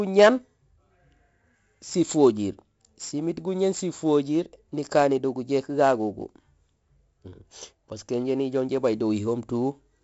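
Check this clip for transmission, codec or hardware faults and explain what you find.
One codec fault runs through the whole speech recording. 4-bit ADPCM compression, present from start to end, stores each sample as a coarse 4-bit step from a prediction. Its error rides at the speech's level as heavy gritty hiss, with roughened attacks, and nothing is heard above 7.6 kHz, which fits a 64 kbps stream at a 16 kHz rate.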